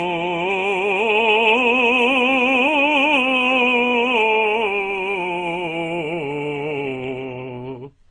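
Throughout the music, nothing is heard above 11.9 kHz, and smeared, swirling artefacts from several kinds of coding sit on top of one another. This points to transcoding between lossy codecs, likely low-bitrate encodes re-encoded into a final WMA stream that preserved earlier damage.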